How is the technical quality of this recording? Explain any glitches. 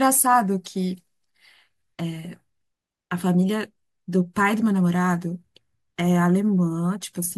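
Listening to it closely, nothing in the recording stood out as a glitch or technical problem.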